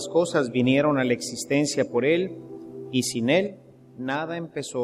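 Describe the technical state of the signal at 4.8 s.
At 4.8 s you're inside a sudden gain jump that starts at 3.47 s and runs right to the end. The whole signal dropped about 6 dB in one step, with the background noise falling by the same amount as the sound itself. That lockstep drop points to a digital gain change, likely a setting or bit shift applied instantly without a ramp, rather than anything happening at the source.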